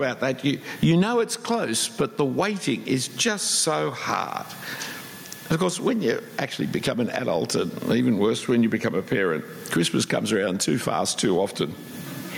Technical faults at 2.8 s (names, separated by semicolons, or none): gain pumping